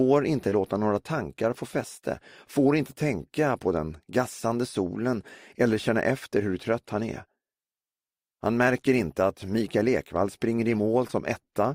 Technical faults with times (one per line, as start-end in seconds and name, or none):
0.49-0.53 short concealed packet loss
11.07-11.11 short concealed packet loss